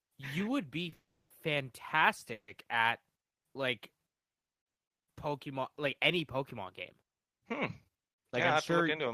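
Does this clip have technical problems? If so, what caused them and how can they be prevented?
Yes. At 0.89 to 0.94 s a short stall from a late packet holds the speech about 30 ms; unlike a freeze, it never falls silent.

Two call audio freezes follow, at 0.94 to 1.32 s and 2.33 to 2.5 s. Each is a fading buzz before silence, of 300 ms and 80 ms. The likely cause is packets held up on the network, which emptied the jitter buffer; nothing is lost, only delayed.

From 8.52 s to the end, a jitter buffer speed-up plays the speech about 6% faster at the same pitch. It trims out a small amount of audio to cut the extra delay held in the jitter buffer. Because the pitch holds steady, this is distinct from a simple playback-rate change.

Prevention is a larger or adaptive jitter buffer on a steadier, prioritised network path, with gentler catch-up after bursts.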